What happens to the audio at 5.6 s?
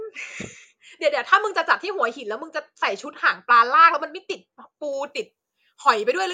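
At 5.6 s you're in the middle of a stretch of pre-emphasis left on, running from about 4.93 s to the end of the clip. The treble was boosted for transmission and the matching de-emphasis never got applied, so the top end sits about 10 dB hot at 10 kHz relative to 1 kHz, a tilt that fits the 50 µs FM curve. The speech turns thin, bright and spitty, with sibilants jumping out.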